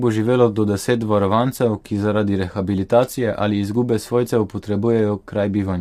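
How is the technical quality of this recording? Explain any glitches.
Quality is reduced by plainly audible codec damage across the whole speech clip. Low-delay AAC compression runs throughout. The sound points to AAC-ELD, likely near 32 kbps. Its short frames resolve pitch harmonics poorly, leaving the voice rough and grainy.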